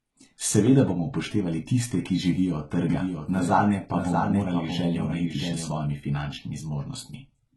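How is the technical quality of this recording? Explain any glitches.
Two things stand out. There's heavy codec damage all the way through, and a stretch where the speech is doubled up.

The whole clip has the smeared, synthetic treble of HE-AAC compression at a very low bitrate, likely around 16 kbps. The top end is rebuilt from copies of lower bands rather than coded directly, so s sounds come out gritty and lispy, and the highs sound bright but not quite real.

From 2.89 s to 5.71 s you get a doubled audio track, likely a second copy mixed in by a slower capture path or an edit. It trails by roughly 0.7 s at about 5 dB down, with no room decay, and cuts in and out abruptly.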